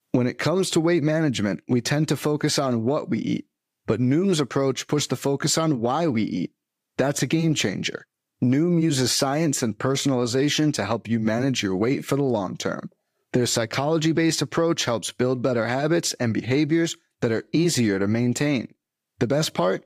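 No audible technical faults anywhere in the recording.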